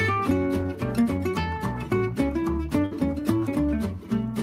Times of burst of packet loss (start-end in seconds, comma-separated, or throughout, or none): 2.85-2.93